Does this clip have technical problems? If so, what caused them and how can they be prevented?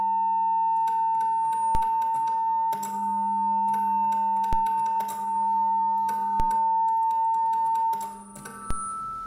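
Yes, there's a DC step at 1.75, 4.53, 6.40 and 8.71 s: the waveform's zero line jumps by about -16 dBFS each time, giving a low thump that bleeds away through a 5 Hz high-pass. Prevent it by stabilising the converter's offset and not switching inputs mid-take.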